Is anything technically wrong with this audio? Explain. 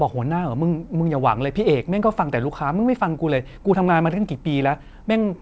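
No, nothing stood out on listening to this speech clip, which has the limited high end of a call path that carries nothing above 8 kHz.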